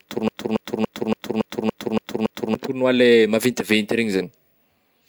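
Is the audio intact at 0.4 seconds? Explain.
No. From the start to 2.55 s, one 0.28 s speech fragment repeats eight times back to back. This broken-record loop is likely a stalled stream resending its last piece.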